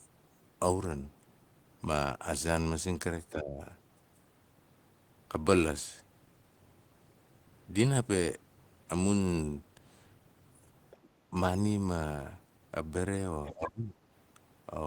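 An echo canceller that likely could not tell the local talker from loudspeaker echo while both sides spoke pulls the speech down from 3.33 to 3.61 s, with the deepest dip around 15 dB. This is speech suppressed in double talk, and it leaves a brief dip in the talker's level. From 10.91 to 11.08 s, the other side's voice leaking through is heard faintly, roughly 25 dB under the speech, as a scrap of a second voice the canceller likely failed to remove from the microphone. A very short suppression dip of a few decibels follows at 11.31 to 11.35 s, likely from the same double-talk confusion. The leak recurs at 13.45 to 13.52 s, a little louder at around 20 dB below the speech, likely for the same reason. Right after it, from 13.52 to 13.92 s, the talker is pushed down hardest, by about 20 dB, likely because the canceller treated the overlap as echo.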